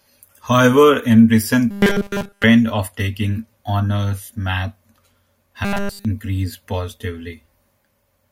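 From 1.71 to 2.44 s and 5.65 to 6.05 s, robotic sound from repeated short buffers turns the speech into a rigid 200 Hz buzz, likely from a 5 ms block replayed in place of all new audio. Its fixed pitch sets it apart from ordinary distortion.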